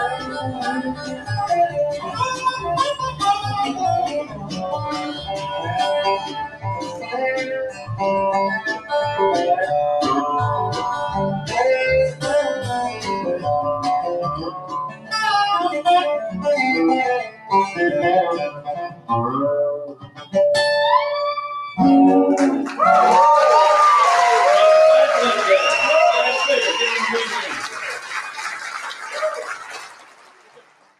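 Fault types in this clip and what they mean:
Noise suppressor applied to music or sounds: A suppressor tuned for speech stayed active across the whole clip and kept judging sustained, steady material to be background noise. It keeps pulling those parts down, so the level swings by roughly 15 dB as its gain moves. Sharp onsets slip through near full strength while held tones and decaying tails sag behind them. The result is a pumping, unsteady sound that keeps thinning out.
Sound cut by the noise suppressor: At certain moments the suppressor misread the sound as noise and turned it down harder than its general treatment. Drops reach about 11 to 15 dB, in stretches from 0.11 to 2.2 s, 4.23 to 8.92 s, 11.4 to 15.13 s, 16.37 to 17.51 s, 18.51 to 20.34 s and 27.98 s to the end. In these stretches sustained parts sink and tails are clipped short, while abrupt sounds mostly remain intact.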